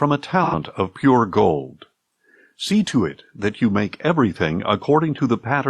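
A short run of AAC frame loss with concealment hits this speech clip from 0.44 to 0.55 s: about 85 ms of coded audio went missing, which fits two lost frames, and the decoder rebuilt the gap from the last good spectrum, leaving a brief smeared, noisy patch.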